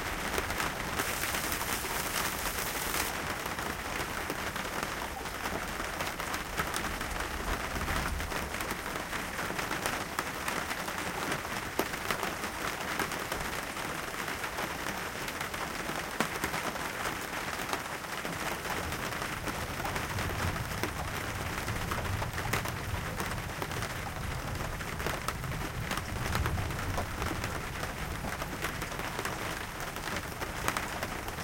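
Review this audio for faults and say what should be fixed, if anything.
Pre-emphasis left on, from 1.01 to 3.09 s: the treble lift of the CD 50/15 µs curve was applied without the matching de-emphasis, so high frequencies sit about 8 dB hotter at 10 kHz than at 1 kHz, making the sound thin, bright and sibilant. To prevent it, check the pre-emphasis flag at every transfer stage and apply the matching de-emphasis on playback.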